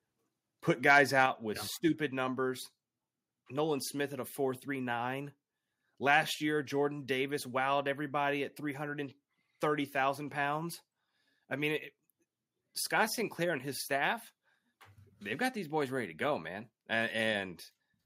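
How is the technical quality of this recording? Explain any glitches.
The recording has two kinds of glitch, both tied to a microphone input set too hot.

Microphone overload, from 0.9 to 1.23 s and again from 6.13 to 6.16 s: the input level was likely pushing peaks about 4 dB and about 1 dB past the converter's ceiling. A small share of samples get flattened tops, giving those loud moments a harsh, crackly edge.

Microphone volume stepped down, at 1.26 s, just before "with yeah stupid numbers": the call software likely reacted to that first overload by cutting input gain by about 4 dB in one move. Voice and background both drop abruptly in level.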